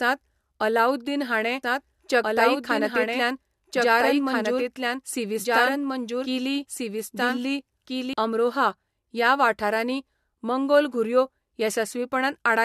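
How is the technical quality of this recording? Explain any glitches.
The technical quality is compromised by two faults: a band-limited, re-encoded sound throughout and a stretch where the speech plays twice at once.

Low-bitrate audio saved at a high bitrate affects the whole clip. Nothing exists above 13.1 kHz, a hard ceiling that shows on a spectrogram as a flat, empty band. This likely comes from a low-rate encoding, around 64 kbit/s, later re-saved at a high MP3 rate. The re-save could not restore the lost detail.

A doubled audio track runs from 1.63 s to 8.13 s, starting just after "अलाउद्दीन हाणें". A full-band copy of the speech follows about one and a half seconds behind at roughly equal level, so two overlapping phrases compete. It is likely a second capture or misaligned edit. The waveform shows the density jumping abruptly at both ends.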